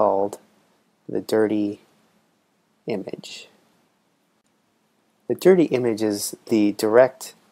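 AAC frame loss with concealment occurs at 3.57 s. A gap of about 21 ms, which points to a single lost frame, was filled by the decoder rebuilding the missing audio from the last good spectrum. This produces a brief smeared, noisy patch.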